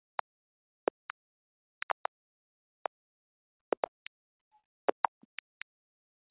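From 0.92 to 5.08 s, repeated packet loss chops the sound into dozens of brief holes, none longer than about 50 ms. Each is patched by extending the preceding sound, covering roughly an eighth of the stretch. Unlike a single dropout, the holes recur rapidly, giving a choppy sound with pieces missing over band-limited, 4 kHz call audio.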